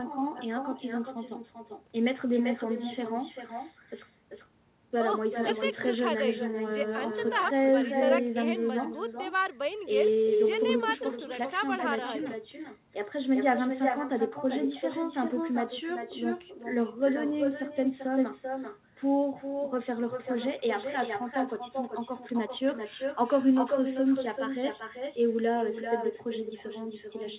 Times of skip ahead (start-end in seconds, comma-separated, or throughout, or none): none